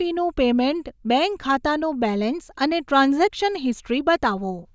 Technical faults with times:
none

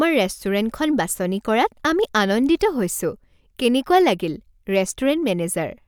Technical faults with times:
none

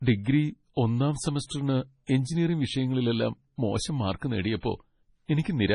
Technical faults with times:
0.00-5.75 MP3 compression

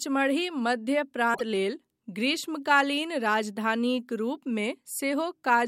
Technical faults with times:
1.33-1.41 broken MP3 bit reservoir

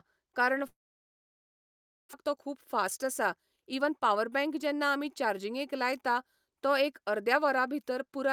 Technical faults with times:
0.67-2.15 long network dropout
2.22-5.73 jitter buffer speed-up

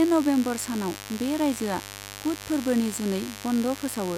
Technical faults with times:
0.00-4.17 mains buzz

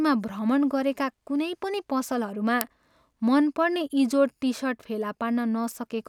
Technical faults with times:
2.61 uninitialised buffer

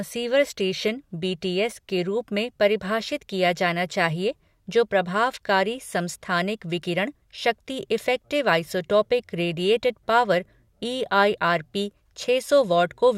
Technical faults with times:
none

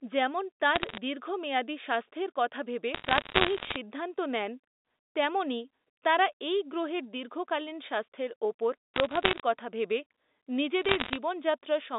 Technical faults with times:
0.75-0.98 bit errors on a digital phone line
2.94-3.76 bit errors on a digital phone line
8.96-9.40 bit errors on a digital phone line
10.82-11.17 bit errors on a digital phone line

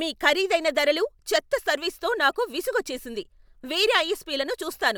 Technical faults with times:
none

